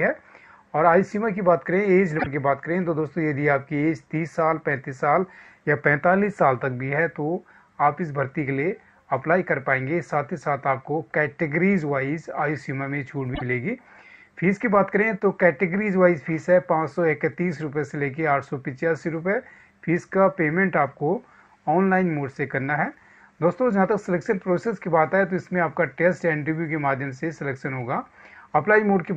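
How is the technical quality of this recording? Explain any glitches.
Two short glitches break the audio, both most likely from a broken MP3 bit reservoir. At 2.18 s and again at 13.34 s, a burst of about 80 ms corrupts the sound and the audio skips ahead. The likely cause is frames missing from the stream: the next frames look back for data stored in earlier frames and decode the wrong bytes. A damaged span of about three frames fits standard 26 ms MP3 frames.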